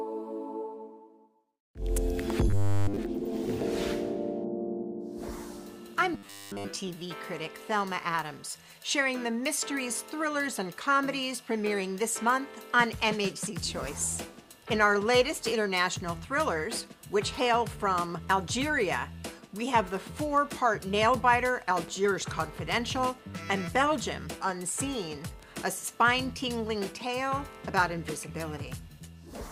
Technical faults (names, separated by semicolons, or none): robotic sound from repeated short buffers; train of clicks